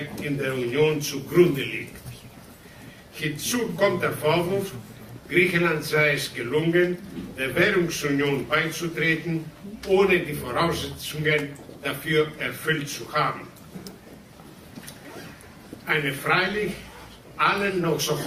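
No technical faults are audible.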